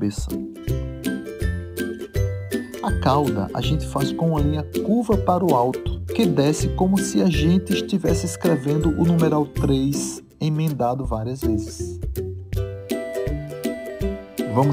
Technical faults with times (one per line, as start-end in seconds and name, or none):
0.00-14.73 sample clock jitter